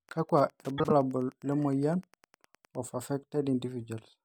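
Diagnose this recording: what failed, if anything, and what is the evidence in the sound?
A steady ticking about ten times a second runs under the speech from the start to about 2.84 s, faint at roughly 30 dB below the signal. This is Wi-Fi interference in the analogue wiring: a nearby radio's 102.4 ms beacon is being rectified by the audio circuit.

Between 0.78 and 0.91 s the speech turns into a brief garbled flutter, and no time is lost. These are frames out of order in the network or storage stage. Two neighbouring blocks of about 52.2 ms each, which fits two frames apiece, were decoded in swapped order.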